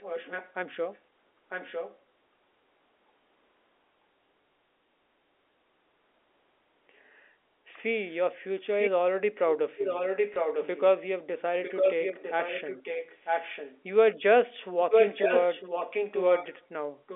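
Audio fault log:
0.00–0.54, 0.94–0.98, 1.49–1.99, 8.65–8.90, 9.77–10.82, 11.63–13.83, 14.82–16.65, 17.07–17.15 s: echo leak. A copy of the talk returns about 0.95 s late, from barely audible to matching the speech level, likely a far-end loudspeaker echo canceller failing to remove it.
4.44 s and 10.34–10.36 s: packet loss with last packet repeated. One 20 ms packet is lost each time and refilled by replaying the previous one, giving a small blip within the telephone-band audio.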